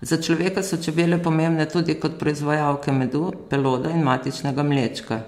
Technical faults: none

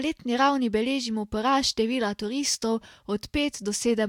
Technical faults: none

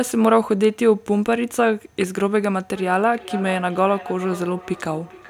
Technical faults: feedback echo between two devices

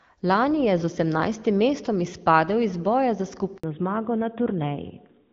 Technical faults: handover gap; fallback to narrowband

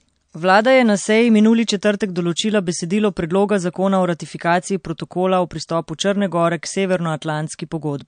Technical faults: MP3 compression

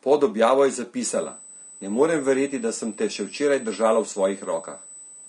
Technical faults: low-delay AAC compression; USB whine

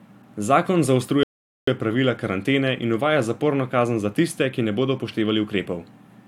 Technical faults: rebuffering stall

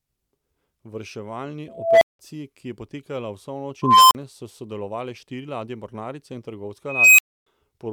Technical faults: unstable filter

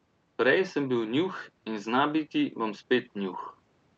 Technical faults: none

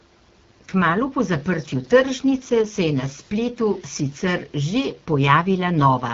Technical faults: AMR wideband (HD Voice) codec

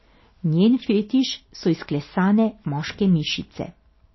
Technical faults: MP3 compression

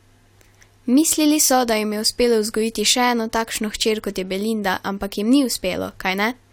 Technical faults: none

